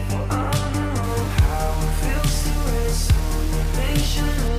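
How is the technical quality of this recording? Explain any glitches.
The recording has one clear fault. From 1.03 s to 4.48 s, the audio shows low bit depth without dither. The likely cause is that the signal was rounded to very few levels, consistent with about 5 bits, with no dither added. Because the rounding error tracks the waveform, it becomes a grainy, gritty distortion that shifts with the sound. The error sits only roughly 20 dB below the signal.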